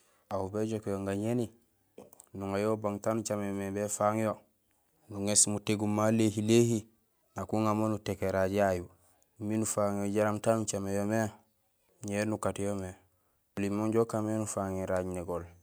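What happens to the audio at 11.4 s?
At 11.4 s the speech carries on without any audible fault; nothing breaks, drops out or distorts at that point.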